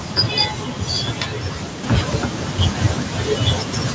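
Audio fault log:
1.84 s to end, sudden gain jump: speech and background noise step up together by about 4 dB with no fade, likely an unramped gain change.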